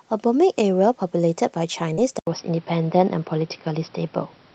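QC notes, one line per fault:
1.93–1.99 s, short concealed packet loss: about 40 ms of sound failed to arrive, and the receiver filled it by carrying the preceding sound forward, then blended back into the real signal. It comes across as a brief smear or wobble rather than a gap. A plain dropout would leave silence or a click, but here the hole is papered over with continued sound, so the cue is a momentary unnatural sameness.
2.19 s to the end, input switched to a poorer device: after a short silence of about 80 ms, the sound turns duller and boxier. Nothing remains above about 5.7 kHz, the level shifts by roughly 5 dB, and a new noise floor appears, roughly 35 dB below the signal. The likely cause is the input moving to a lower-quality microphone or a headset call profile. Before the switch the call codec passes content up to about 12 kHz. A codec cutoff would hold steady from the start, so the abrupt change in tone and background at one moment points to a change of device.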